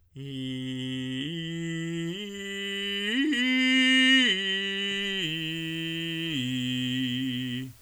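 Low bit depth with dither, 5.23 s to the end: dithered rounding to 8 bits leaves a steady, even hiss about 30 dB under the music.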